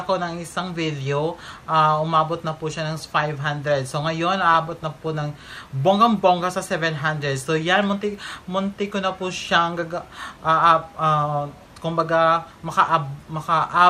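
From 4.54 to 5.07 s the audio bubbles and squelches with chirpy sub-band jumps, which is DAB burbling: bit errors at well under one percent slipped past error correction into the MP2 frames. At 8.05 s a single sharp click cuts through, most likely dropped samples, with about one sample missing so the waveform jumps abruptly.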